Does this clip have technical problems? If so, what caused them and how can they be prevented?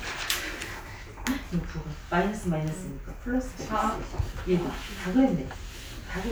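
No, nothing in this audio points to a technical fault. Since there is no problem here, there is nothing to trace back or prevent.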